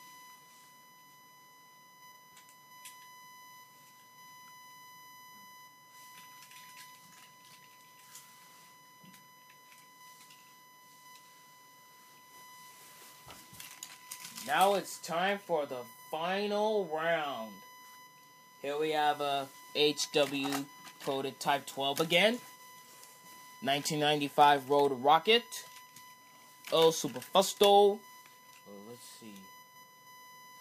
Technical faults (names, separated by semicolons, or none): USB whine